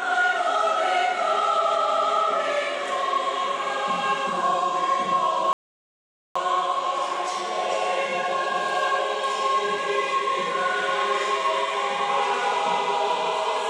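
At 5.53 s the sound halts in a rebuffering stall: the player exhausted its downloaded audio and fell silent until more arrived at 6.36 s. Unlike a dropout, nothing is skipped; playback resumes exactly where it stopped, adding about 0.82 s.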